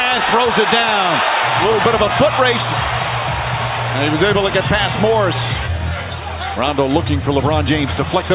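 No technical faults can be heard anywhere in the audio, and the signal stays steady and intact throughout.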